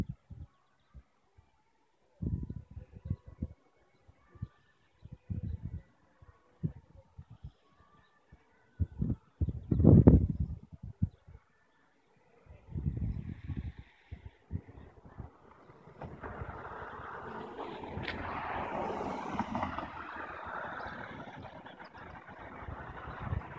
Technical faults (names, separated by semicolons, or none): none